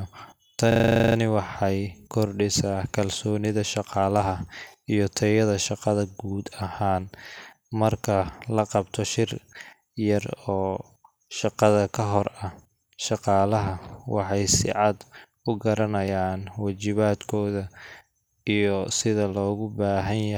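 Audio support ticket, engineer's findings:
System hang loop, 0.72 to 1.16 s. The speech sticks on one 40 ms slice repeated 11 times, giving a machine-gun stutter at 25 Hz. Driver or host likely froze while the audio interface kept replaying its ring buffer. Practically nothing gets skipped afterwards.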